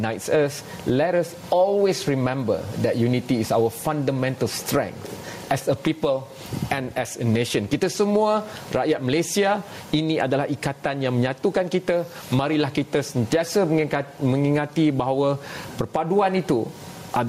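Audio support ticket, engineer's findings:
Gain pumping throughout clip. Input gain likely set far too high for mic, with fast limiter/compressor clamping down on each loud sound and releasing in gaps. Gain swings around 15 dB. Loud and soft passages pushed close in level; overall sound squashed, breathing with the signal.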